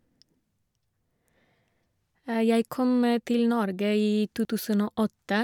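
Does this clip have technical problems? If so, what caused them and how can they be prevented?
Yes. At 4.45 s there is a small jump in the speech, likely a dropped buffer (overrun): about 20 ms was lost before being read, joining both sides directly. Prevent it with larger input buffers and higher-priority audio threads.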